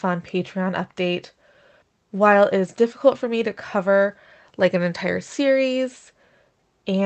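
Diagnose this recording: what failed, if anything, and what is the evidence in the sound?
Nothing in the speech signal points to a failure at any stage of the chain, with level, continuity and timing holding steady throughout.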